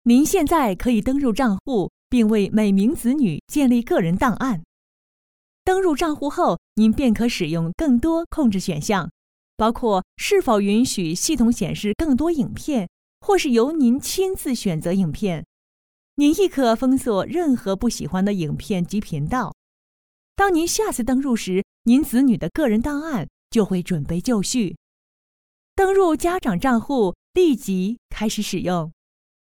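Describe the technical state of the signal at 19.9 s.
At 19.9 s the signal is intact, with no dropout, distortion, glitch or other technical fault audible at that point.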